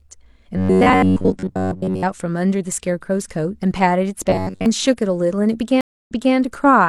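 Robotic sound from repeated short buffers appears from 0.57 to 2.04 s and again from 4.30 to 4.66 s. The speech collapses into a rigid metallic buzz near 93.8 Hz, most likely because audio arrived too seldom and the player looped a slice of about 10.7 ms in place of most of the real signal.

A stream reconnect follows at 5.81 to 6.35 s. The connection dropped, leaving a 258 ms silence, then a fresh decoder picked up mid-stream. Playback resumes 279 ms earlier than where it stopped, so a short stretch of speech is heard twice.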